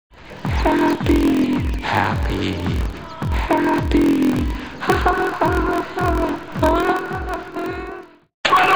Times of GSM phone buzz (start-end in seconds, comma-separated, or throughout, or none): none